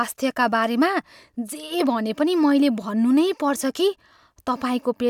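No technical faults can be heard anywhere in this speech recording, so there are none to describe in time order.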